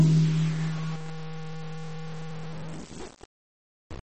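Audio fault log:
throughout, low bit depth without dither: The music was most likely truncated to very few levels with no dither, and the graininess fits about 5 bits. Because the rounding error tracks the waveform instead of being spread out as noise, it turns into distortion that changes with the music. It sits only about 15 dB below the music, so quiet passages sound coarse and gritty.
throughout, MP3 compression: The music was likely squeezed through an MP3 encoder with far too few bits, and the damage fits a rate near 32 kbps. The encoder has removed everything above 8.4 kHz, which dulls the top end. It has also discarded weaker frequency components, which then flicker in and out from frame to frame. The result is a plainly audible watery, swirling texture with metallic chirps in the upper range, and attacks that smear instead of landing cleanly.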